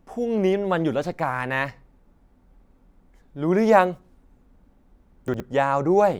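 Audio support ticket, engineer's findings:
Chunks out of order, 5.28–5.4 s. Brief jumbled moment near end of speech. One 60 ms chunk delivered late, played after its successor; nothing lost, but swapped order leaves three hard joins. Probable component: buffering/reassembly stage releasing chunks without sequence check.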